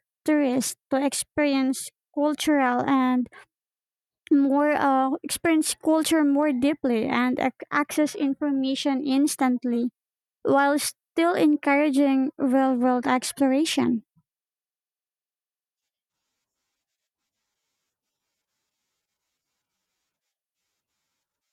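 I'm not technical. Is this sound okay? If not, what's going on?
Yes, this one's fine: there are no dropouts, glitches or other technical problems to worry about anywhere in it.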